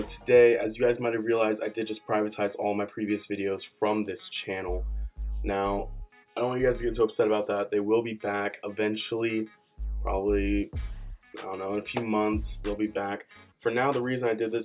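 Nothing in the audio stood out as a technical fault on listening.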